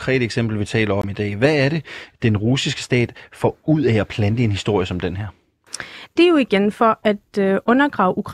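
At 1.02 to 1.04 s, between "eksempel vi taler" and "i dag", a block of digital silence cuts 20 ms of speech to zeros, probably from an unfilled output buffer. It sounds like a short hole. The waveform shows a flat line, and the spectrogram shows a blank vertical strip.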